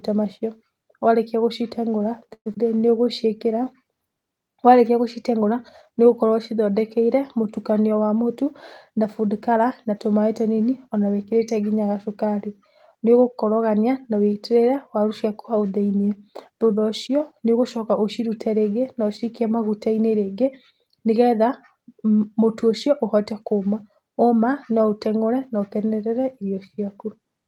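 At 2.33 s the speech stops and the last sound is drawn out as a fading buzz or hiss that falls to about 70 ms of silence before the audio resumes at 2.48 s. This is a call audio freeze, likely from packets held up in transit so the jitter buffer ran empty. About 123 ms of fill was inserted and nothing was lost, so that much delay was added.

Just after, between 2.54 and 2.56 s, playback skips ahead. Roughly a tenth of a second of speech is dropped and the two sides are joined almost directly, with only a few milliseconds of fill. This takes back about the same amount of delay.

From 2.75 to 3.66 s a jitter buffer slow-down follows. Single pitch periods are repeated many times in a row, adding 90 ms. The speech runs at 91% speed at unchanged pitch, so sounds are drawn out as the receiver rebuilds its reserve.

From 7.91 to 9.85 s a jitter buffer speed-up trims short pieces of one or a few pitch periods, removing roughly 100 ms in total. 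The speech runs at 106% speed at the same pitch and sounds hurried while the receiver cuts its excess delay.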